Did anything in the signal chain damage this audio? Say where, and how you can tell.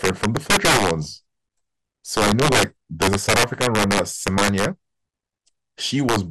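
Yes. Throughout the speech there's a dull, gurgly, grainy quality with the top end switching in and out, which points to MP2 compression at a codec stage, likely at a low rate. It sounds like about 80 kbps, with the damage plainly audible.

There's also integer overflow in the sample-format or gain stage. Loud passages crack violently at 0.04–0.91 s, 2.17–2.63 s, 3.02–4.65 s and 6.09–6.16 s, where peaks pushed about 2 to 8 dB past full scale and wrapped to the opposite sign instead of clipping.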